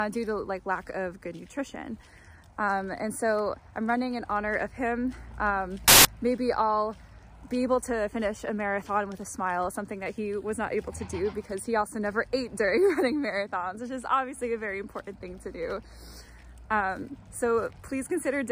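Samples built from the wrong bytes appear from 5.88 to 6.05 s, a burst of about 0.17 s. For that stretch the bytes making up each sample were assembled incorrectly, whether shifted by one byte, swapped in order or read with the wrong alignment. The rapidly fluctuating low-order bits ended up in the most significant position, so the values bear no relation to the waveform. The result is a sudden blast of loud, harsh broadband noise replacing the sound.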